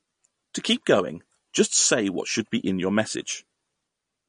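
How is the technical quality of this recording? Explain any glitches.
The technical quality is poor throughout the speech, with plainly audible coding damage from start to finish. Nothing reaches above 10.1 kHz, and the remaining sound has a watery, swirling texture. That points to likely MP3 compression at a low bitrate, fitting roughly 40 kbps. Short of bits, the encoder cuts off the treble and drops weak frequency components, which flicker frame to frame. A plain low-pass filter would dull the sound without that swirl.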